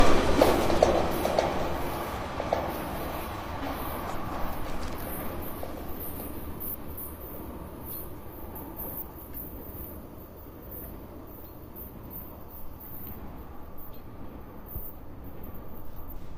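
Frames out of order occurs at 4.12–4.51 s, 6.59–6.98 s, 8.55–8.98 s and 15.77–16.16 s. Each time, two adjacent 186 ms blocks, which fits runs of four frames, were decoded in swapped order. The halves play exchanged as a garbled flutter, and no time is lost.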